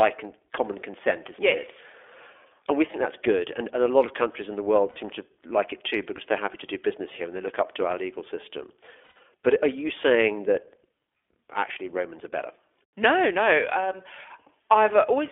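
It's a speech clip run through the iLBC codec the whole way, and you can hear it: nothing above about 3.4 kHz and little below 300 Hz, so it's a thin telephone band. The codec damage is plainly audible, with that slightly rough, synthetic edge iLBC puts on a voice as it rebuilds each frame's excitation on its own. That fits the 15.2 kbps mode with 20 ms frames. On top of that there are lost iLBC frames in three spots. The first, from 2.92 to 2.96 s, is a brief 20 ms dropout, about one frame. The second, 4.90 to 4.98 s, covers about 60 ms. The worst is 9.04 to 9.20 s, where around 140 ms goes missing in pieces over 160 ms, with the longest stretch around a tenth of a second. Each gap is the decoder papering over missing packets by repeating the last pitch cycle with noise mixed in, so it comes out as a held, buzzy or breathy vowel that fades in the longer loss. Because each iLBC frame decodes independently, the voice snaps back cleanly right after.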